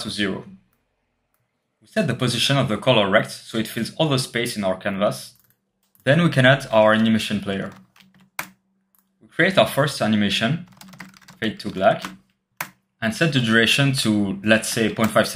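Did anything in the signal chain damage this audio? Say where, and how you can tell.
No, nothing in the chain audibly damaged this audio.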